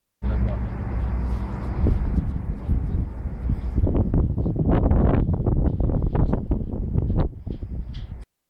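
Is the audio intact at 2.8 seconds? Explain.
Yes, the audio at 2.8 seconds is intact, with no dropout, click, distortion or other fault at that point.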